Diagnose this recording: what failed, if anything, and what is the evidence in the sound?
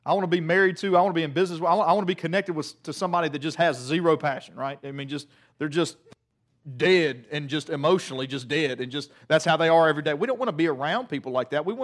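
Nothing in the signal chain audibly failed: there's no dropout, distortion, timing break or level fault anywhere in the recording to pin on any stage.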